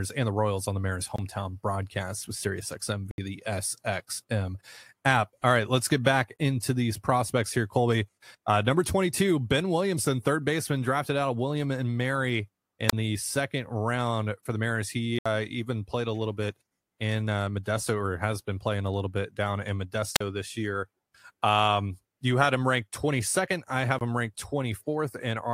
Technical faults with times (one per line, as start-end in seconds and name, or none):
1.16-1.18 block of digital silence
3.11-3.18 block of digital silence
6.36-6.39 block of digital silence
12.88-12.93 wireless microphone squelch dropout
15.19-15.26 block of digital silence
20.15-20.21 wireless microphone squelch dropout
23.99-24.01 block of digital silence